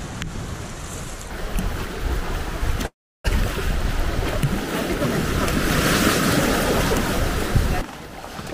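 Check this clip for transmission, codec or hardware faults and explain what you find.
One transmission fault appears. From 2.85 to 3.26 s there is a call audio freeze: the last sound smears briefly, then about 0.34 s of silence follows, and the audio resumes exactly where it stopped. The likely cause is delayed packets emptying the jitter buffer. Unlike a dropout, nothing is lost; roughly 0.39 s of delay is inserted.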